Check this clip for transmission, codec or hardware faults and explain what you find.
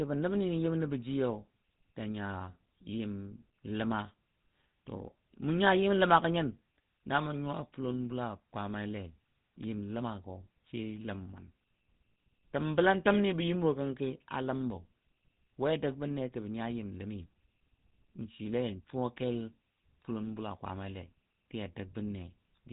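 There is one codec fault, present across the whole recording.

Throughout, the speech has a buzzy, gravelly roughness and a dull, band-limited tone with nothing above 4 kHz. That is GSM full-rate codec damage, plainly audible here: the vocal tract is modelled and driven by a sparse, regularly spaced pulse excitation, which fits a 13 kbps GSM full-rate stream.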